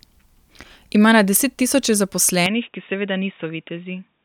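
Right after "na desettisoče", at 2.46 s, the speech abruptly goes dull and a little quieter, losing everything above 3.8 kHz; likely an input switched to a poorer device.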